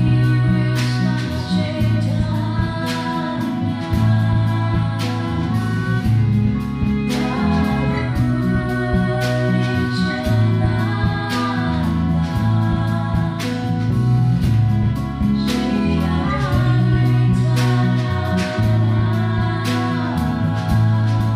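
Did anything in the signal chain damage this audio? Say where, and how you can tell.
No, nothing in the signal chain audibly damaged this audio. I can't hear a mark left by any stage between capture and playback.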